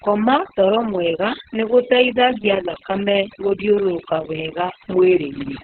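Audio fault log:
Throughout, overdone noise removal: a noise reduction stage was pushed far too hard. Every frequency band that came close to its noise estimate was pulled right down or switched off, and the quieter parts of the speech fell below that line and were cut away with the noise. The background drops to near silence scattered with twinkling specks, while the speech has its softer detail eaten out.
Throughout, Opus voice compression: the encoder ran in its SILK speech mode at narrowband, and nothing above about 4.3 kHz survives, which points to a very low bitrate, around 6 kbps, with long frames that fit a 60 ms setting. With so few bits, the excitation signal that drives the voice model is coded only roughly. The speech comes out muffled and hoarse with a slightly robotic edge, and the codec damage is heavy.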